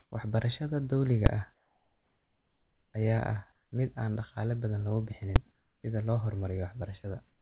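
From 0.00 to 0.12 s the background becomes comfort noise, likely from discontinuous transmission: a steady, featureless hiss about 3 dB above the real background, appearing as an even, textureless band on a spectrogram. At 1.26 s invalid numbers at full scale pin the output for about 5 ms, a single loud bang that shows on the waveform as a flat rectangle held at one extreme. After "dawliga ah", comfort noise fills 1.54 to 2.94 s about 5 dB quieter, and the speech returns with its onset clipped, likely by the voice detector. The first 50 ms before "ayaa ah mid" are missing, so the spectrogram shows energy starting with a hard vertical edge. Comfort noise returns at 3.52 to 3.72 s (about 2 dB quieter) and 5.52 to 5.84 s (about 5 dB quieter). A second full-scale bang at 5.36 s follows "dhaqaale badan". At 7.02 to 7.04 s sound is dropped, likely by the voice detector, leaving a 20 ms notch of flat noise in the trace. 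Comfort noise then runs from 7.28 s to the end, about 1 dB quieter. Throughout, the call path shows no energy above 4 kHz, consistent with a narrowband telephone codec.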